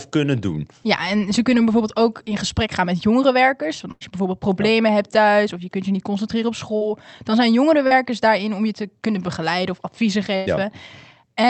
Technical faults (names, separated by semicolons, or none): burst of packet loss; short concealed packet loss